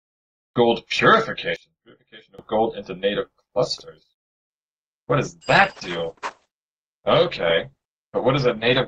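From 1.56 to 2.39 s the audio collapses by about 23 dB, leaving a faint residue with the centre almost gone. The likely cause is one channel inverted: with one side's polarity flipped, everything common to both channels cancels in a mono sum, and only their difference survives. On a waveform this shows as a sudden narrow band of low amplitude; a spectrogram shows the whole stretch dimmed.

From 4.50 s to the end, the quality drops abruptly with no gap. This is the adaptive stream at a lower bitrate: the player switched to a much leaner encode, and the result points to a change from an Opus stream at around 64 kbit/s to one near 12 kbit/s. Treble is cut, with nothing above 8.7 kHz, and codec artefacts rise in the remaining detail. A spectrogram shows a hard ceiling at 8.7 kHz from that moment onward.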